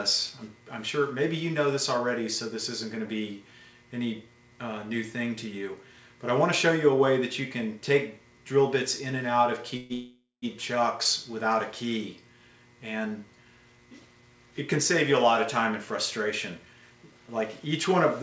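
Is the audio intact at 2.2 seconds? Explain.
Yes, the audio is intact at 2.2 seconds, with no dropout, glitch or distortion there beyond the ordinary band limit of the call path, which passes nothing above about 8 kHz.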